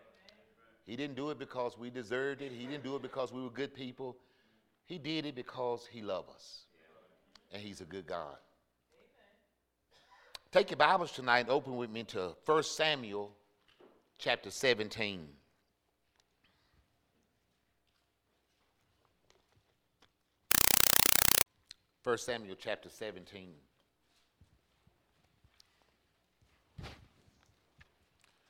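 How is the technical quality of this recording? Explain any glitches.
The recording has one serious glitch, lasting just under a second.

Compressed stream played as audio, 20.51 to 21.46 s: undecoded Dolby Digital data is read as samples, producing 4 ms noise bursts 31.25 times a second, heard as loud chattering static.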